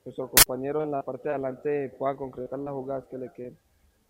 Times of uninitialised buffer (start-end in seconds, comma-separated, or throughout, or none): 0.37-0.46